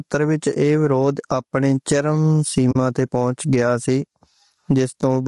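From start to finish the level swings by roughly 20 dB, so quiet and loud stretches sit unnaturally close together and the speech sounds squashed. This is gain pumping, and it likely comes from a microphone gain set far too high with a fast limiter clamping it down. Unlike a noise gate, which cuts the background to near silence, here the gain is pulled down on each loud sound.

Throughout the clip the speech is rough and grainy, with a noisy fill between the harmonics and a lowered or synthetic top band. That points to low-delay AAC compression of the AAC-ELD kind used in video calls, likely at a bitrate near 32 kbps. Its short frames resolve pitch harmonics poorly, and the damage is plainly audible. The graininess sits on the voiced sounds themselves, not as the watery, swirling tones typical of a standard long-frame codec at low rates.

From 2.71 to 2.76 s the speech fades out into a short hole about 40 ms long and fades back in. 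This is AAC frame loss with muting. The length fits two lost frames whose spectrum the decoder set to zero, with the overlapping windows smoothing the transitions. The soft edges set it apart from a hard dropout or buffer underrun, which would cut in abruptly and usually click.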